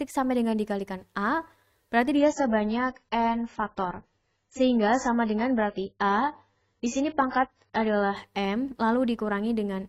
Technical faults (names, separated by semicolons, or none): adaptive stream at a lower bitrate